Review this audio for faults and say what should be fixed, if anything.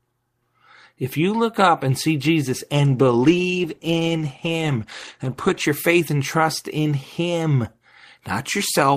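A call bitrate drop runs from 2.86 to 5.68 s, starting just before "your faith and trust". The speech turns coarse and duller, which fits the encoder being forced from about 32 to 16 kbps. Unlike a fixed low-pass filter, the dullness comes and goes with the bitrate. Unlike packet loss, nothing drops out. To prevent it, set a higher minimum bitrate and smooth the bandwidth estimator so brief dips don't starve the encoder.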